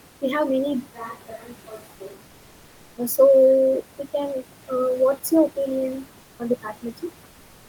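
Speech with three system faults. From 0.81 to 2.45 s, right after "we have many", the close microphone likely dropped out, leaving a switch to a distant microphone: the voice turns hollow and roomy, about 10 dB quieter, with the room far more exposed. Within that stretch, from 1.28 to 1.50 s, speech was cut by the noise suppressor, which mistook about a tenth of a second of speech for noise and pulled it down by up to about 8 dB, so those sounds come across swallowed. At 6.21 to 6.39 s, between "your opinion" and "on the", the sender halted transmission during the pause, which points to Opus discontinuous transmission, and the receiver filled the 180 ms gap with comfort noise in place of the background: a smooth, featureless hiss about 2 dB quieter that briefly stands in for the real room sound.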